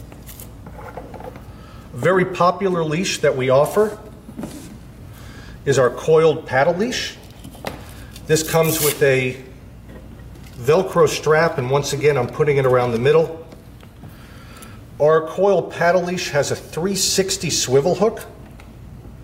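No audible technical faults: level, timing and continuity hold steady throughout, with nothing to flag.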